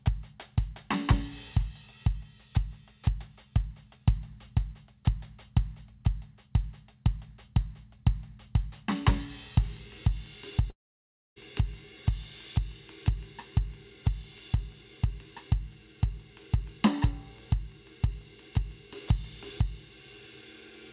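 At 10.7 s the music breaks off until about 11.38 s, most likely a long network dropout: the last sound smears into a fading buzz, then near-silence, over a band already capped at 4 kHz.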